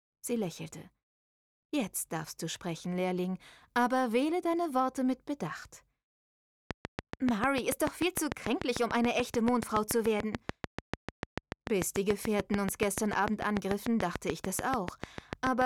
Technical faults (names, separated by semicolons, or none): train of clicks